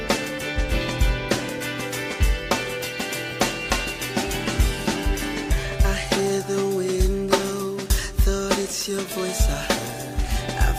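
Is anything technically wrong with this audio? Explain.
Yes. A DECT cordless phone buzz runs through the whole clip. A nearby DECT handset or base station transmits a brief radio burst 100 times a second, and the audio circuitry rectifies those bursts into a 100 Hz pulse train rich in harmonics. It sounds like a thin, steady buzz sitting about 40 dB below the wanted sound. A spectrogram shows a comb of horizontal lines at 100 Hz multiples, and a zoomed waveform shows small spikes every 10 ms.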